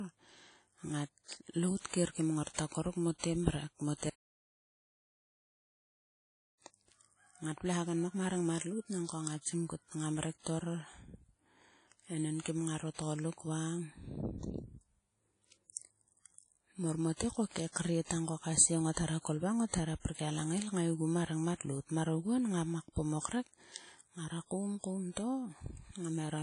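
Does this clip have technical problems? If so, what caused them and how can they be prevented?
Yes. WMA compression runs through the whole speech clip. The codec damage is plainly audible as a ringing, washy smear with a hiss that rises and falls with the voice, and nothing remains above about 10.1 kHz. The likely cause is a Windows Media Audio encoder with long transform blocks, which spreads quantisation noise over tens of milliseconds and, at a rate that fits roughly 32 kbps, discards weak spectral detail. Prevention: record and deliver in a lossless format or a modern codec at a higher bitrate.

An audio dropout to silence runs from 4.10 to 6.61 s. The speech cuts off abruptly, leaves about 2.5 s of dead silence with no room tone, then resumes mid-flow. Whatever was said in that gap is lost. This is likely because the input was interrupted, whether by a disconnected device, a failed link or a stray mute, while the recorder kept writing silence. 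Prevention: secure connections, monitor input levels live, and lock mute controls during recording.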